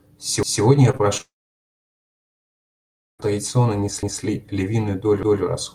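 A speech recording with three separate problems. Overlapping chunks appear at 0.43 to 0.63 s, 4.03 to 4.23 s and 5.23 to 5.43 s. Each time, a 200 ms stretch plays twice because a new one-second block begins before the previous block has finished. The result is a stutter with a click at the seam. On a waveform, the same 200 ms shape appears twice in a row. On a spectrogram, the harmonics break with a vertical edge and then repeat. Short concealed packet loss occurs at 0.91 to 0.95 s, 0.97 to 1.01 s and 1.17 to 1.21 s. In each case about 20 ms of audio failed to arrive, and the decoder filled the gap by extending the preceding sound before rejoining the real signal. These are heard as brief smears or wobbles. On a spectrogram they show as short patches of flattened, frozen harmonics or grey noise, and the waveform loses its natural variation for a moment. A long network dropout runs from 1.21 to 3.21 s. 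Roughly 1.6 s of audio goes missing, most likely because the connection stalled. The last sound is stretched into a fading buzz, and then about 1.5 s of near-silence follows before the speech resumes partway along. This appears as a flat band on the waveform and an empty region on the spectrogram.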